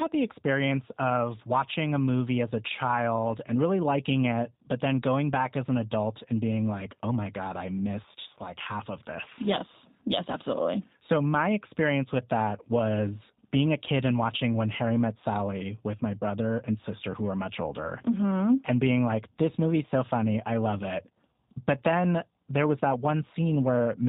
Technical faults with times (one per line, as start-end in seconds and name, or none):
0.00-24.09 G.729 codec